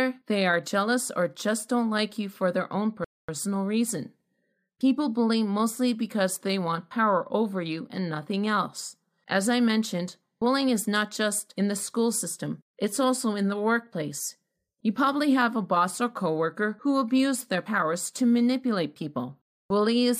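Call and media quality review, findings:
Speech halts to silence after "you for their own", 3.04 to 3.29 s, then resumes exactly where it stopped, nothing skipped. Rebuffering stall: playback buffer ran dry, player waited for more downloaded audio, adding about 0.24 s.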